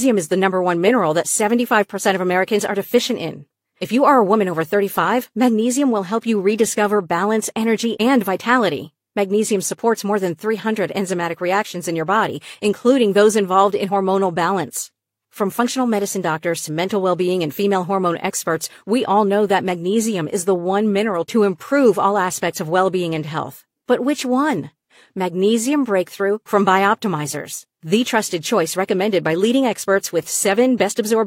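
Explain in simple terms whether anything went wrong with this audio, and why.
Nothing went wrong here; the speech runs along without a single glitch, dropout or odd sound worth pointing out.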